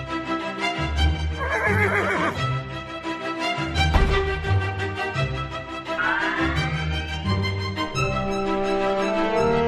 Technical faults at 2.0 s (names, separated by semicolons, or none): none